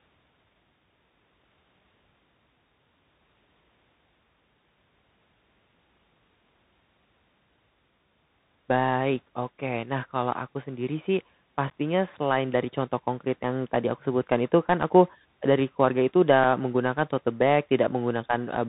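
From the start, the speech carries the Bluetooth CVSD headset codec: nothing passes above 4 kHz, s sounds turn scratchy and a granular hiss sits underneath, unlike a clean low-pass, fitting a 64 kbit/s link. Unconcealed Bluetooth headset packet loss punches abrupt holes at 11.7 s (11.2 ms), 16.44 s (3.8 ms) and 17.87 s (7.5 ms). These are gaps of silence or an idle pattern rather than smoothed-over repeats, with a brief quieter recovery, consistent with one to a few lost packets each.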